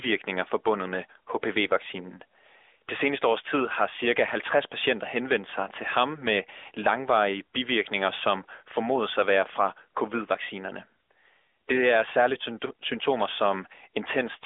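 Speech clip; no technical faults can be heard.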